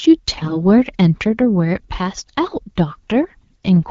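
Speech with AMR bit errors from 0.36 to 0.57 s. Flipped, weakly protected codec bits turn the voice hoarse and gargly, smearing harmonics into noise on a spectrogram while waveform level holds steady.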